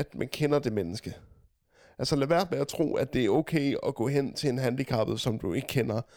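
No technical faults can be heard anywhere in this speech recording. There is nothing here to place on a timeline or trace to a cause.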